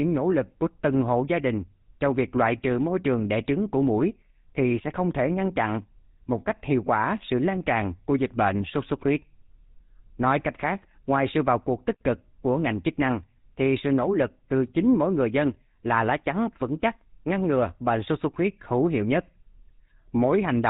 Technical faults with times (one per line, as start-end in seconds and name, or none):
0.00-20.69 GSM full-rate codec